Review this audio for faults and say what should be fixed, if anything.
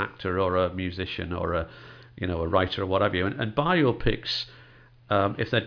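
Nothing here needs fixing: the speech signal holds steady levels and continuous playback with no technical faults audible anywhere in the recording.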